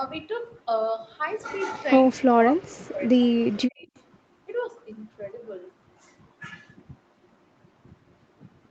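Speech that twice sinks sharply, by roughly 40 dB at its deepest, from 2.42 to 3.03 s and again from 3.19 to 3.93 s, with the voice breaking up and partly vanishing. This is likely speech suppressed in double talk, the echo canceller muting the near talker while the far side spoke.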